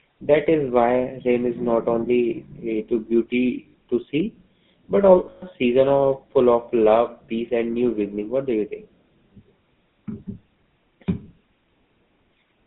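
Throughout, the GSM full-rate codec is plainly audible. The speech is confined to about 150 Hz to 3.7 kHz, with a buzzy, gravelly roughness.

Lost GSM frames occur at 3.68–3.75 s and 5.18–5.43 s. The decoder repeats old settings, so the sound rings metallically. The second loss is broken, with gaps up to about 100 ms.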